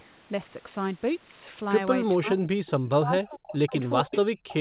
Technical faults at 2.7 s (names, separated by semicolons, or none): speech suppressed in double talk; echo leak